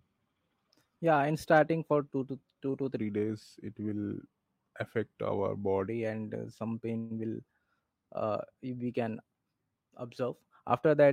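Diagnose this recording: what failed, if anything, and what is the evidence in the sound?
A section at the wrong speed runs from 2.98 to 5.88 s, likely a playback or editing stage using the wrong clock. Just after "to two to", the speech slows to 0.887 times normal speed and drops about two semitones, returning to normal at "and uh some".

A call audio freeze from 6.98 to 7.12 s, after "and uh some", points to the network and jitter buffer. Late packets emptied the buffer, and the receiver stretched the last sound for 123 ms as a fading buzz or hiss. Speech then resumes 123 ms later with nothing lost.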